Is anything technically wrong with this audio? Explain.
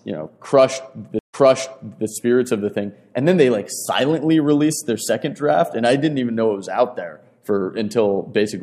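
Yes. At 1.19 s there is a stream reconnect: the audio stops for 87 ms, then a fresh decoder resumes about 0.78 s earlier. This repeats recent sound rather than skipping ahead like a plain dropout.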